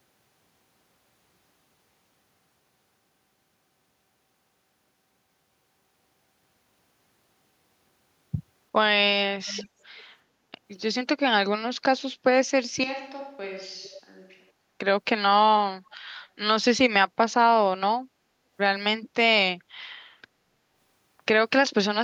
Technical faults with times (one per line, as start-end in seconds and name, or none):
9.46-9.68 echo leak
9.98-10.03 echo leak
12.84-14.51 switch to a distant microphone
13.82-14.01 echo leak
15.91-15.97 echo leak